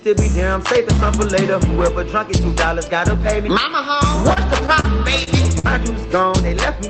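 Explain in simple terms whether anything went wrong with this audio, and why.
Four short stalls from late packets show up near the end: at 4.33 to 4.38 s, 4.80 to 4.86 s, 5.24 to 5.29 s, and 5.59 to 5.66 s. Each time, the next piece of audio arrived late, so the call software ran out and stretched the last bit of sound, for 30, 40, 30 and 50 ms. Then it picked up where it left off. Nothing is lost, but you hear little hiccups, like a sound held a touch too long.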